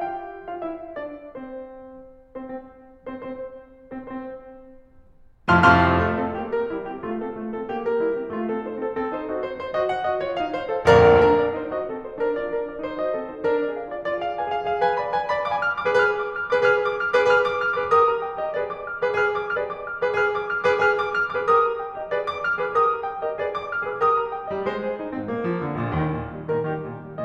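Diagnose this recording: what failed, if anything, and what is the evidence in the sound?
Playback stage, streaming side: a stream segment repeated. At 19.55 s the music jumps back and replays roughly a second of material, ending at 20.55 s, so about 1.0 s of extra audio gets added and everything after runs that much late. There's a small blip right at the jump where the waveform splices back. The player fetched or queued the same chunk twice and simply played it through again.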